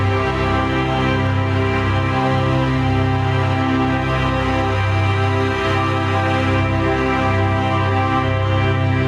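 A sound recording with gain pumping throughout: the gain ducks by about 15 dB under loud sounds, likely from excessive gain hitting a fast limiter, unlike a noise gate's abrupt cut to silence.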